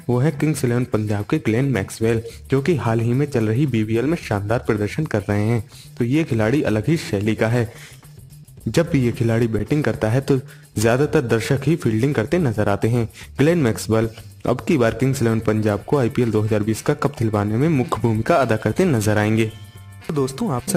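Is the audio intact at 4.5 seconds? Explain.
Yes, at 4.5 seconds the audio plays through cleanly, with no dropout, click, distortion or other fault at that moment.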